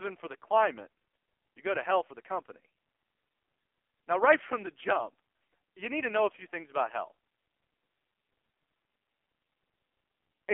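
Throughout, AMR narrowband mobile codec damage: speech is confined to roughly 300 Hz–3.4 kHz, with heavy buzzy, synthetic coding that fits a low bitrate near 5.9 kbps.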